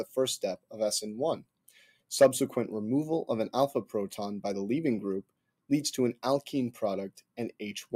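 A speech-tuned noise suppressor applied to music or sounds is active through the whole clip. It treats sustained and decaying material as noise, so the level keeps sinking and recovering by about 5 dB, giving a pumping, fluttering and thinned character while sharp onsets pass through. On a waveform the envelope wobbles between attacks, and on a spectrogram the steady partials and tails look patchy and shortened rather than smooth. Beyond that constant action, there are four stretches of sound cut by the noise suppressor, where it clamps down hard, by about 21 dB at the deepest: 0.57 to 0.73 s (roughly 150 ms affected), 1.38 to 2.11 s (roughly 700 ms), 5.23 to 5.70 s (roughly 300 ms), and 7.14 to 7.61 s (roughly 300 ms). Held or fading sound collapses in these spans and decays are chopped off. The waveform shows abrupt dips in amplitude, and the spectrogram shows dark, nearly emptied blocks across the band before energy returns.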